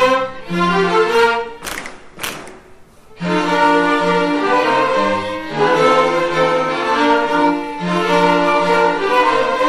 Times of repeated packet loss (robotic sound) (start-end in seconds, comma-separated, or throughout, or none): none